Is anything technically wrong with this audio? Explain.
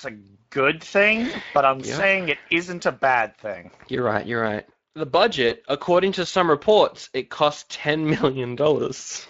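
Yes, two things. The whole clip carries Speex codec damage, and there are two short dropouts patched over by the decoder.

The Speex coding is audible from start to finish. Speex is a CELP codec that rebuilds speech from a filter plus a coded excitation signal. Here the excitation gets coarse enough that the speech sounds grainy and hoarse rather than clean. The damage is plain to hear, and the sound fits a Speex setting of roughly 20 kbps.

The VoIP packet loss concealed by the speech codec shows up at 1.31 to 1.37 s and again at 5.49 to 5.55 s. Each one fits a single lost 20 ms frame. The decoder filled the gap by extending its last pitch and filter while dropping the gain. You hear a brief smear, and the speech stays weak and off for a few tens of milliseconds afterwards while the decoder recovers.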